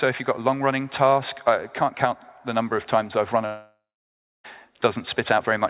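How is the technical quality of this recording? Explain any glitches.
The recording has one clear glitch. It comes through a narrowband call path with nothing above 4 kHz, which fits G.711 mu-law at 64 kbps.

Long network dropout, 3.46 to 4.46 s: about a second of audio likely never arrived. The receiver stretched the last sound into a fading buzz, then left about 0.64 s of near silence. The sound resumes with the lost stretch simply missing.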